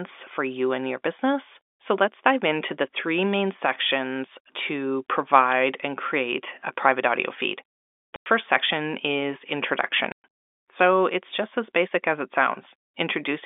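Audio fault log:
8.16–8.26 s and 10.12–10.24 s, packet loss filled with silence: the sound drops into dead silence twice, first right after "a private audio feed" and before "section is", lasting 100 ms, then again for 120 ms. The gaps were most likely left by lost packets that the receiver replaced with zeros. Both lengths are whole multiples of 20 ms, which fits 20 ms packets. The narrow telephone band of the G.711 coding can be heard around the gaps.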